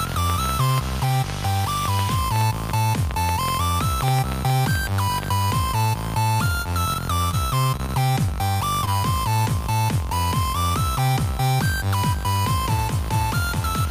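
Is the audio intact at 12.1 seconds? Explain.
Yes, the audio at 12.1 seconds is intact, with no dropout, click, distortion or other fault at that moment.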